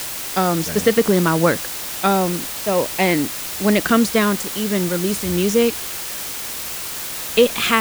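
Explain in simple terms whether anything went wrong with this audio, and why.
Low bit depth with dither runs throughout: storing the speech with only 5 bits leaves a loud, steady hiss. Unlike undithered rounding, it stays smooth and never turns gritty.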